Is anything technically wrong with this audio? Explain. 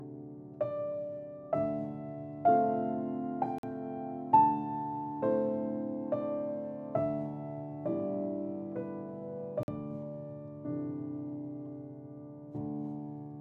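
Yes. There is a gap between chunks, heard twice: from 3.58 to 3.63 s and from 9.63 to 9.68 s. Each time the sound drops to silence for about 48 ms. The two holes fall about 6.0 s apart, which fits audio delivered in 6-second chunks with silence inserted at each join. The cause might be padding or a late start on each chunk. Nothing is lost, but the flow is interrupted at each boundary.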